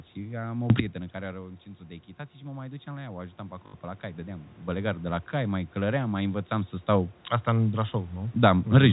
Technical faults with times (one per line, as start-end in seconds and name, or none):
0.70-0.80 sudden gain jump
1.16-4.57 automatic gain rising
3.66-3.74 packet loss with last packet repeated
4.68-8.92 sudden gain jump